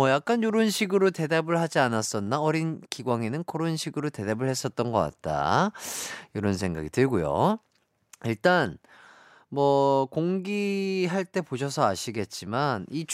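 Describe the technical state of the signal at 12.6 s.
At 12.6 s the signal is intact, with no audible technical fault at that point.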